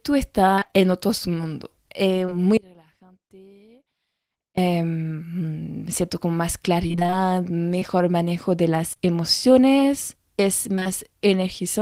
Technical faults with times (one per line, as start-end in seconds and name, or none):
0.55-0.82 repeated packet loss (robotic sound)
2.26-2.33 short concealed packet loss
2.57-4.57 audio dropout to a faint residue
6.87-7.83 repeated packet loss (robotic sound)
8.93-9.08 short concealed packet loss
10.75-10.87 repeated packet loss (robotic sound)